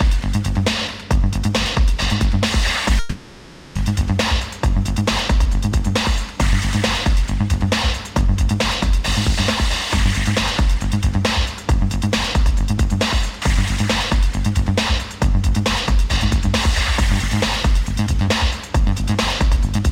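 A long network dropout runs from 2.99 to 3.77 s: for about 760 ms the last sound is stretched into a fading buzz or hiss, the likely result of the receiver concealing missing packets, and the audio resumes afterwards without the lost stretch.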